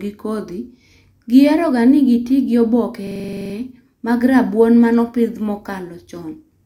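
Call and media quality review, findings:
System hang loop, 3.07 to 3.54 s, just before "mag rabuon". Machine-gun stutter: one 42.67 ms chunk repeats 11 times, about 23.4 Hz. Driver or host froze while hardware kept cycling its ring buffer, fitting a 2048-sample buffer.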